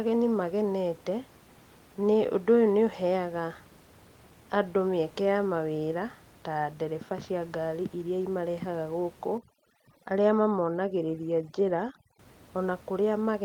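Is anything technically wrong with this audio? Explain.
Yes. From 9.38 to 12.19 s, just after "ngari iria imarehaga gũkũ", overdone noise removal strips frequency bands near the noise estimate, leaving twinkling near-silence. The room noise, about 25 dB below the speech, is part of the recording itself.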